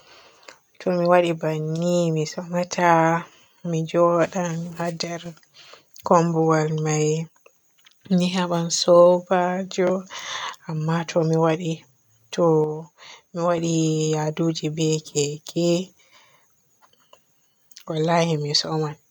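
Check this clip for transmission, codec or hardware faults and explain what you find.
Two brief drops in level are present, consistent with one channel drops out. From 5.04 to 5.26 s and 12.64 to 13.58 s, the speech falls abruptly by about 6 dB, then recovers. The likely cause is one stereo channel cutting out, halving the mono sum.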